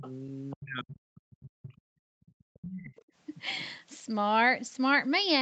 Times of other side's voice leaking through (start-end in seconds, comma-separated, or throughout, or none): 0.00-0.11, 0.50-0.56, 1.72-1.81, 2.26-3.02